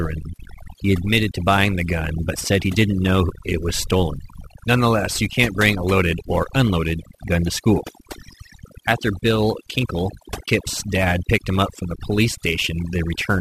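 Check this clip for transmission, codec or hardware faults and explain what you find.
Three faults are audible in this speech: heavy noise processing, converter clock instability, and one brief dropout.

Overdone noise removal runs throughout. The suppressor gates bands near its noise estimate, leaving twinkling specks on a near-silent background. A spectrogram shows patchy, speckled gaps.

Sample clock jitter is also present throughout. Timing errors of several microseconds add hiss, roughly 25 dB below the signal, that follows loud, high-frequency passages and vanishes in pauses. A spectrogram shows haze above strong harmonics.

AAC frame loss with muting occurs from 10.46 to 10.48 s. Zeroed spectra leave a 20 ms soft-edged hole, which fits two lost frames. The waveform tapers out and back.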